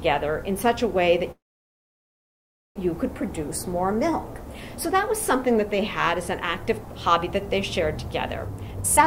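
At 1.31 s the sound stalls until 2.78 s, a call audio freeze. The last sound is briefly carried on, then nearly 1.4 s of the gap is silence. The likely cause is packets held up in transit, draining the jitter buffer. Unlike a dropout, where audio is lost and the sound jumps ahead, it resumes exactly where it stopped, so about 1.44 s of delay has been inserted and nothing is missing.

From 8.47 s to the end at 9.06 s comes a jitter buffer speed-up. The receiver, holding more audio than it wants, repeatedly cuts out short pitch-period slices, here roughly half a second in total, so playback runs at about 182% of normal speed. Unlike a sped-up recording, the pitch stays where it was; the sound is simply hurried, its timing compressed while its tone is unchanged.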